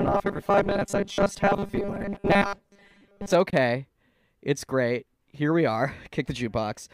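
From 0.01 to 3.33 s the speech has a rigid, metallic 200 Hz buzz that roughly tracks the words. This is robotic sound from repeated short buffers, likely replaying 5 ms chunks over most of the audio. Unlike a plain pitch shift, the fixed buzz ignores the speech's own pitch. At 3.50 to 3.53 s, a 21 ms silence, consistent with one lost packet, points to a likely Bluetooth dropout. The speech resumes as if it had kept playing, which distinguishes it from a pause.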